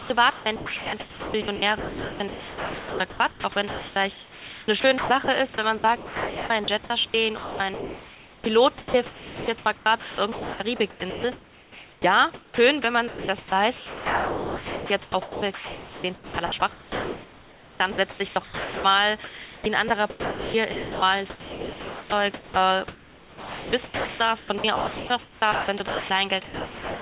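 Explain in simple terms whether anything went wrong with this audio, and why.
Choppy throughout, from 0 to about 27.0 s: the speech keeps cutting in and out, and the gaps are filled with a smooth, artificial hiss. This is sound chopped by the voice detector. About 17.1 s of the clip was swapped for filler noise, likely because the sender's voice detector kept deciding the speech had stopped and switched off sending. The telephone-like sound, with nothing above 4 kHz, comes from the call line itself.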